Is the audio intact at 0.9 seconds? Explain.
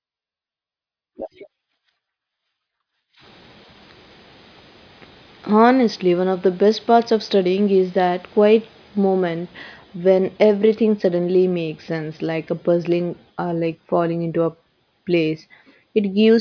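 Yes, the speech at 0.9 seconds is intact, with no dropout, click, distortion or other fault at that moment.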